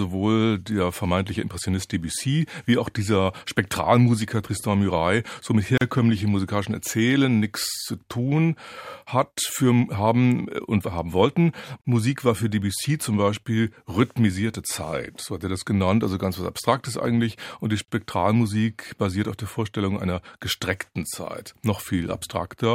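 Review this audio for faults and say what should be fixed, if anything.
The speech drops out briefly three times: at 5.78 to 5.81 s, 11.81 to 11.85 s, and 17.85 to 17.88 s. Each is a gap at a join of encoded pieces, lasting 37, 34 and 34 ms. They fall every 6.0 s. The audio was encoded in separate segments and butted together. Each segment's encoder start-up silence and final-frame padding were never trimmed, so sound drops out with smeared edges and resumes where it left off. To prevent this, trim encoder delay and padding before joining, or encode the material as one continuous stream.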